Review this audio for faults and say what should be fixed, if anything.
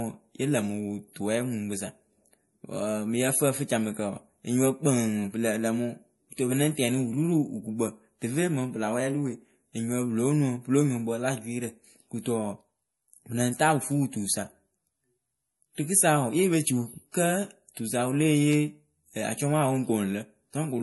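The speech carries audible compression damage from start to finish, likely MP3 compression. Nothing is present above about 11.5 kHz, so the s sounds lose their crisp top. The encoder ran short of bits. It cut the treble at a fixed point and dropped quieter frequency lines. Those lines flicker on and off between frames, which gives a watery, swirly texture and smeared consonant onsets. The damage fits a low bitrate of around 48 kbps. To prevent it, keep a lossless master or export at a much higher bitrate.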